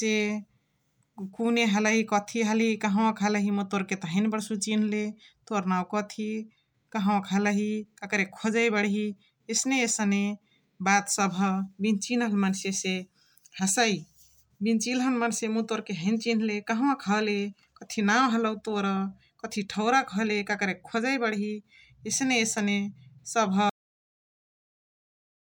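At 23.70 s the speech is chopped off mid-sound, a cut-off end: the final stretch of audio was never written out, so the signal goes straight to digital silence for the last 1.9 s. Unlike a fade-out or a speaker simply pausing, there is no tapering level, no breath or room decay and no background noise left behind; the sound is present one instant and completely absent the next.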